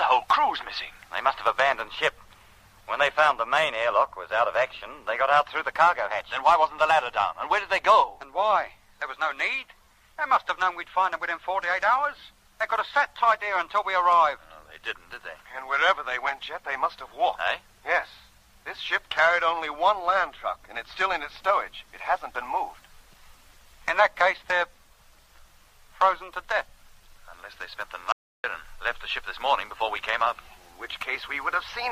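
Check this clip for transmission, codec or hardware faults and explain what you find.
One fault is present: an audio dropout to silence from 28.12 to 28.44 s. The input signal was most likely lost for that stretch, through a disconnected device, a failed link or an accidental mute, while recording carried on writing silence. The sound stops abruptly mid-flow and resumes just as suddenly about 0.32 s later. The gap is dead silence with no room tone at all, and whatever sounded during it is gone.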